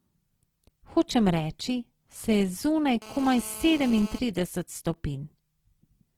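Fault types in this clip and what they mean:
Opus compression: the speech throughout sounds grainy and rough, likely from Opus in its music mode at about 16 kbps, filling starved bands with noise rather than leaving holes.
GSM phone buzz: from 3.02 to 4.19 s, a hard raspy buzz at 217 Hz, about 18 dB below the speech, as a nearby phone's call bursts are rectified.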